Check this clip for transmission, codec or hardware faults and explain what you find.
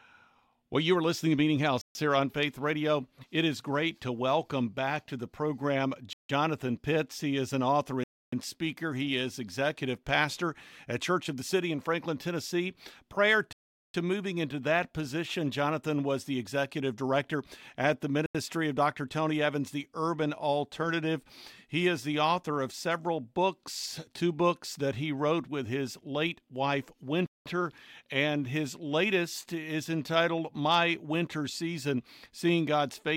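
Six dropouts in this speech clip, all the same kind. At 1.81, 6.13, 8.04, 13.53, 18.26 and 27.26 s the sound cuts to dead silence for between 0.09 and 0.42 s, then resumes. That's a Bluetooth stall, likely interference delaying packets until the headphones' buffer ran empty and playback waited for retransmissions.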